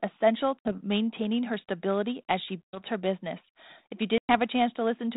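Packet loss on an ADPCM call hits three times, each leaving a hard-edged silent gap:

At 0.60 s, 60 ms drop out just before "maintaining her stability as".
At 2.65 s, 90 ms go missing after "her stability as she", just ahead of "her business".
At 4.18 s, 110 ms are lost.

After each gap the sound comes back distorted, because the decoder's predictor and step size have fallen out of step with the sender's. They resync by about 0.72, 2.81 and 4.30 s respectively.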